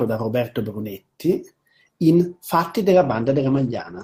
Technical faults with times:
2.95-4.03 call bitrate drop

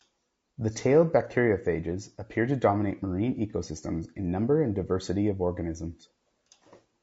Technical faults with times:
0.00-7.03 low-delay AAC compression
3.50-3.54 AAC frame loss with concealment

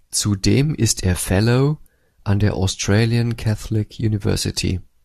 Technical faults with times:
none

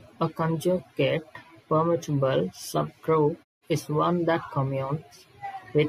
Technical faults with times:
none

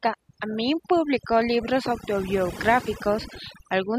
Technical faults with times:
0.00-3.99 overdone noise removal

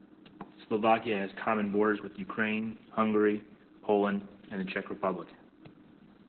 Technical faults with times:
0.00-6.28 Opus voice compression

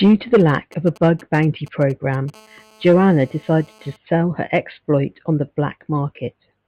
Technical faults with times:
0.40-2.30 GSM signalling bursts
2.34-3.96 GSM phone buzz

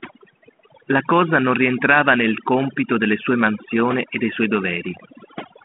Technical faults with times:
0.00-5.64 overdone noise removal
4.97-5.01 bit errors on an ADPCM link

